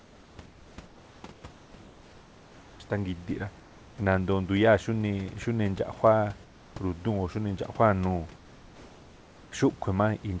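The real background drops out in four pauses, at 0.00–2.80 s, 3.60–3.98 s, 6.44–6.76 s and 8.36–9.52 s, and comfort noise takes its place: a smoother synthetic hiss, about 2 to 3 dB down in the last three, likely from discontinuous transmission muting the sender between phrases.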